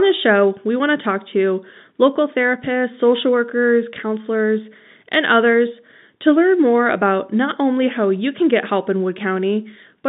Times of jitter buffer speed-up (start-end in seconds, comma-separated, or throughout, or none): none